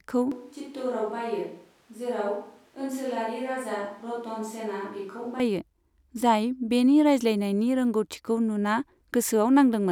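From 0.32 s to 5.40 s the close microphone's signal likely dropped out, forcing a switch to a distant microphone. The speech abruptly turns roomy and hollow, thins in the bass, falls about 10 dB in level over more audible room noise, then snaps back.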